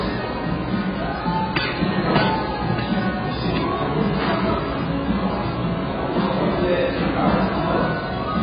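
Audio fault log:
Throughout, AAC compression: the whole clip sounds dull and smeared, with nothing at all above 5 kHz and a watery, warbling texture where the sound should hold steady. That's likely heavy AAC-LC coding at a very low bitrate, which fits something around 12 kbps. The encoder has pulled its cut-off right down and quantised what's left so coarsely that detail gets blurred and patchy across the remaining band.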